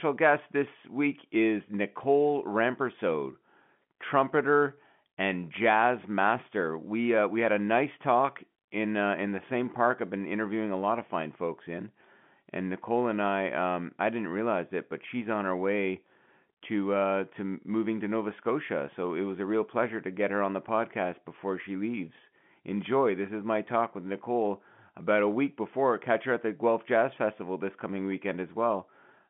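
No technical faults are audible.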